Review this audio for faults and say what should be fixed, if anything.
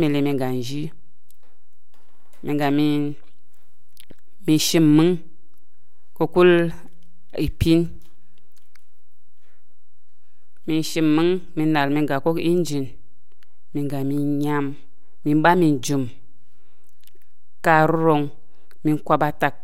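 There's a DC offset running the whole way through the speech, sitting at about -27 dBFS. You won't hear it as such, but the waveform rides off-centre, eating headroom and leaving steady energy parked at 0 Hz. A high-pass filter or DC-blocking stage at capture, with a quick check of the interface, would prevent it.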